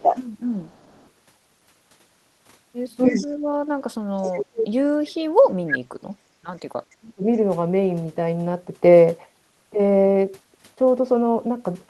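A speech recording carries echo leak and speech suppressed in double talk. A delayed copy of the voice trails it by about 296 ms at 0.0–1.1 s, 3.04–3.27 s, 4.23–4.32 s, 5.69–5.74 s and 6.91–6.95 s. Most are very quiet. The one at 5.69 s is nearly as loud as the speech. The likely cause is a far-end loudspeaker echo that its canceller failed to remove. The voice also dips briefly at 0.02–0.15 s. From 3.09 to 7.26 s it drops out in pieces, by up to about 40 dB. This is likely an echo canceller turning down its own talker along with the loudspeaker echo during overlapping talk.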